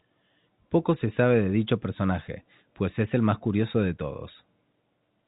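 No technical faults are audible.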